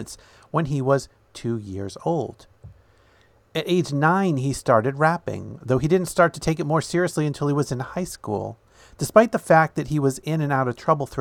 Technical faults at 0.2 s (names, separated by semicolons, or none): none